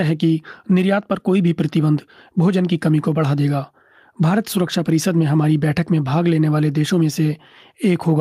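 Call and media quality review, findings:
Nothing to flag on this speech clip, as no dropouts, glitches or level problems turn up anywhere in it.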